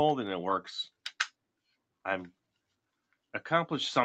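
Likely truncation to about 10 bits without dither, low bit depth without dither, leaves grainy distortion tracking the sound throughout, roughly 40 dB below it.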